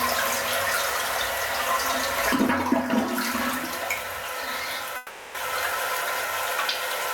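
Gain pumping runs through the whole clip, with the level swinging by something like 15 dB. This is likely an input gain set far too high, with a fast limiter or compressor clamping down whenever the level jumps. The result is a squashed sound, where loud and quiet moments sit unnaturally close together.

A long network dropout runs from 4.97 s to 5.37 s. For about 380 ms, no real audio plays. The receiver keeps extending the last sound it had, which comes out as a buzz or hiss that fades across the gap rather than falling to silence. The likely cause is a stretch of packets that never arrived. When the sound resumes after 5.37 s, it jumps ahead, and the missing section is simply gone.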